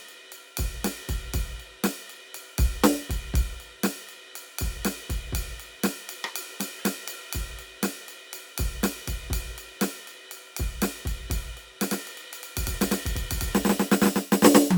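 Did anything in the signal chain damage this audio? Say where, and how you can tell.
Yes. A corrupt frame was decoded at the codec stage, from 6.79 to 6.84 s. A brief chirp-like burst cuts into the music there, peaking around -30 dBFS. Flipped bits in a couple of compressed frames gave the decoder wrong gains or codes, placing energy at wrong frequencies.

A doubled audio track starts abruptly at 11.91 s and runs to the end. A full-band copy of the music, about as loud as the original, trails it by roughly a tenth of a second, with no decay or room colour. It likely comes from a second, slower capture path or an edit holding two offset copies.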